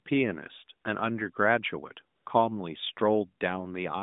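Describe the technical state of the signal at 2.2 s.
AMR comfort noise occupies 2.16 to 2.26 s. For these 100 ms the sending phone treated the talker as silent and sent no speech frames, so the receiver substituted smooth synthetic noise built from a rough level-and-spectrum estimate, replacing the real narrowband background with a steady hiss.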